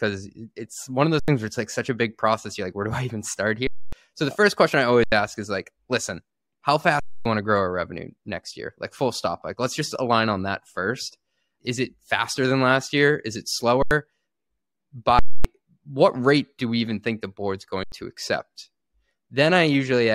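Underrun with held sample at 1.20, 3.67, 5.04, 7.00, 13.82, 15.19 and 17.84 s: the output buffer emptied and the converter held its last value for 85 or 256 ms. The 85 ms gaps fit a 4096-sample buffer. On the waveform the speech flattens to a level line that is often off zero, and the spectrogram shows a blank column. At each gap about a tenth or a third of a second of live audio went missing.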